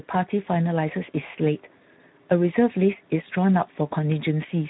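Speex codec damage runs through the whole recording. Speex is a CELP speech codec that models the voice with a vocal-tract filter and a coded excitation. At this setting it has too few bits to describe the excitation well, so the speech sounds noisy and hoarse, and the damage is plainly audible. The hoarseness suggests a low bitrate near 11 kbps. Nothing is present above about 3.9 kHz, which gives the speech a narrow, telephone-like sound.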